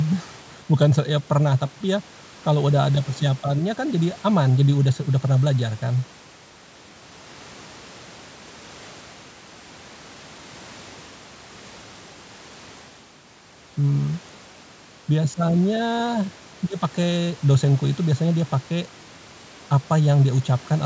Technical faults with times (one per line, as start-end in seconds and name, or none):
none